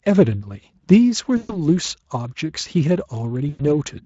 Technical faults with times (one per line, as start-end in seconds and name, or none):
1.37-1.59 VoIP packet loss concealed by the speech codec
3.49-3.65 VoIP packet loss concealed by the speech codec